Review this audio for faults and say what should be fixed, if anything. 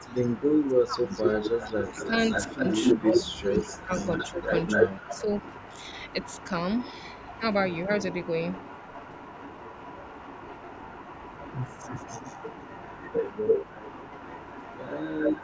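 You can hear the speech ducking in and out early on, which sounds like speech suppressed in double talk. It happens at 0.0 to 0.15 s, 0.6 to 1.11 s, 1.93 to 2.11 s, 2.54 to 2.65 s, 2.98 to 4.42 s and 4.76 to 5.26 s. The level drops by about 10 to 20 dB, with the longest dip in the 2.98 to 4.42 s stretch. The likely cause is the echo canceller mistaking this talker for loudspeaker echo while both sides were talking, so it pushed everything down. A better double-talk detector, or less aggressive residual suppression on this side's canceller, would stop it.

There's also an echo leak, a delayed ghost of the speech trailing behind. From 0.11 to 0.78 s it sits about 206 ms back and is faint, about 25 dB under the speech. From 1.1 s to the end it's about 253 ms late and more obvious, about 15 dB down. The likely source is a speakerphone whose canceller didn't fully remove what its mic picked up from the loudspeaker, so that leftover got sent back down the line. 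A headset on that end, or a canceller that adapts properly to that room and delay, would fix it.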